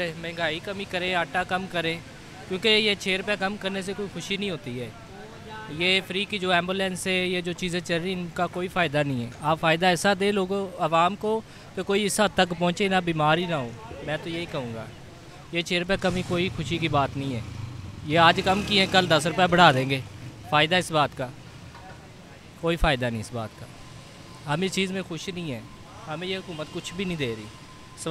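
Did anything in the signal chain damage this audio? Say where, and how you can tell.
No, nothing in the signal chain stood out as damaging this audio on listening.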